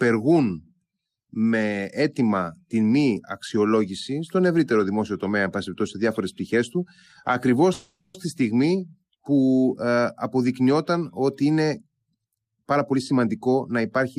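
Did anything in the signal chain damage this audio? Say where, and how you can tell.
Yes. From 7.73 to 8.16 s there is a call audio freeze. The last sound is held as a fading buzz or hiss for about 0.41 s, with no silence. Speech then resumes exactly where it stopped, so nothing is lost. The network likely delayed packets, draining the jitter buffer.

From 12.36 to 14.17 s comes a jitter buffer speed-up. Speech runs at 119% speed, yet pitch stays put, so it sounds hurried. The receiver's buffer trims pitch-period slices repeatedly, shedding about 0.4 s of the delay the freeze added.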